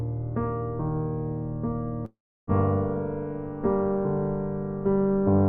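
At 2.05 s the audio cuts into a long network dropout lasting until 2.50 s, likely from a stretch of packets that never arrived. The last sound smears into a fading buzz, then about 0.32 s of near silence, and the audio resumes with roughly 0.42 s simply gone.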